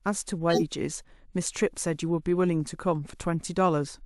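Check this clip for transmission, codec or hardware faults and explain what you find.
One fault stands out in this speech clip. From 0.50 to 0.62 s a loud burst of misplaced energy, peaking fairly high, marks a corrupt frame decoded: about two damaged frames played with garbled gains.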